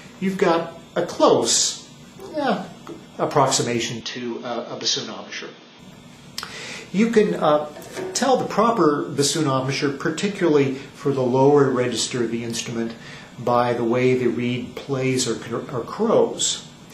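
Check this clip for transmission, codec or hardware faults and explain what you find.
One fault is present, between 4.01 and 5.79 s: the sound abruptly narrows, drops about 5 dB and gains a new noise floor, most likely because the input switched to a poorer device. With no gap at the switch, a spectrogram shows everything above 6.6 kHz vanishing, the waveform shrinks, and fresh background noise sits roughly 30 dB down, so the audio turns dull and boxy until it clears again.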